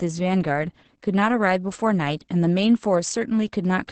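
Across the whole recording, Opus voice compression running its SILK coder at what sounds like roughly 10 kbps codes the excitation coarsely and cuts everything above 8.7 kHz, leaving the speech muffled, hoarse and somewhat robotic, with heavy codec damage.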